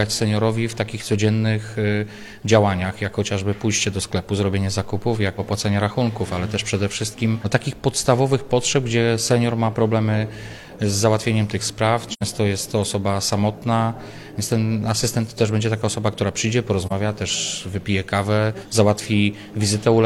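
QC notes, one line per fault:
12.10–12.22 s, AAC frame loss with muting: the sound fades out and back in around a silent gap of about 85 ms. The length fits two lost AAC frames whose spectrum the decoder zeroed, leaving the overlapping windows to soften the edges.
16.86–16.93 s, AAC frame loss with muting: a shorter soft-edged dropout, about 43 ms. This fits a single lost frame muted by the decoder, its neighbours' overlap producing the brief fade out and in.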